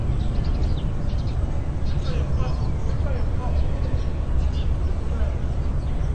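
From start to finish the audio has likely passed through low-bitrate AAC compression, with coarse quantisation that fits AAC-LC at around 32 kbps. Nothing survives above 9 kHz, so the sound is dull and smeared, with a plainly audible warbling, fizzy texture.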